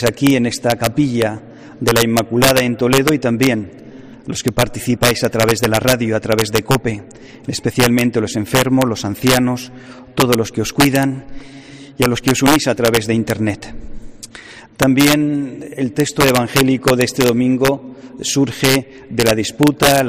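Integer overflow runs through the whole clip, wherever the sound peaks. The signal is driven about 4 dB past the top of the integer range, and instead of being held at the limit, each excess sample wraps around to the opposite extreme. Well under one percent of samples cross that line, but every one that does flips across the full scale. The result is sharp, violent cracks on the loudest moments, far harsher than ordinary clipping.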